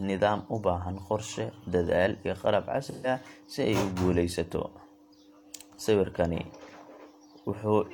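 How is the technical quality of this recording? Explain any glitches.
The recording has one glitch, an AAC frame loss with concealment, between 2.86 and 3.07 s. About 128 ms of coded audio never reached the decoder, which fits three missing AAC frames. With no data for that stretch, the decoder rebuilt it from the last good spectrum, reusing its energy but inventing the fine detail. In this speech clip, that leaves a short smeared, noisy patch where the sound loses its definition before clean decoding resumes.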